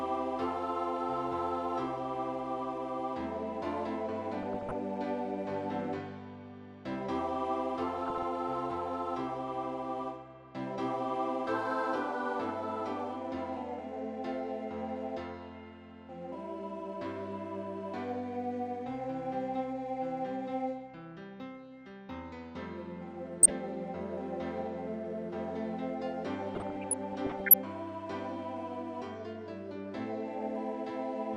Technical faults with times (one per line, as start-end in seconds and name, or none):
0.00-31.36 MP2 compression
4.43-4.75 DAB burbling
7.98-8.23 DAB burbling
23.38-23.50 DAB burbling
26.53-27.54 DAB burbling